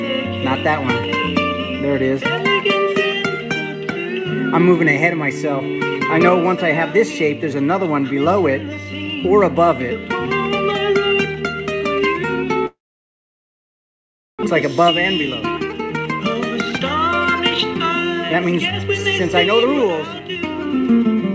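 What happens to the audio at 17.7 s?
At 17.71 s a jitter buffer speed-up kicks in and runs to 21.16 s: short pitch-period chunks get trimmed repeatedly, so the sound plays about 15% faster, hurried but same pitch.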